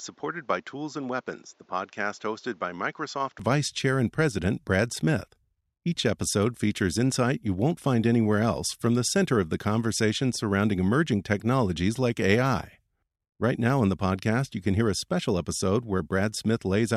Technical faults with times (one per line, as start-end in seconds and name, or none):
0.00-3.39 input switched to a poorer device